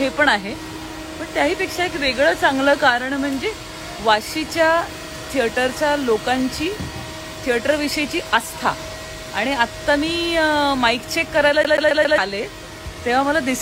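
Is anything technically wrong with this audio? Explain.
Yes. From 11.64 to 12.18 s the sound stutters fast and evenly: the same 136 ms slice plays four times with a brief mute at each jump. This is a CD stuck on one turn, where a scratch throws the laser back one track every revolution.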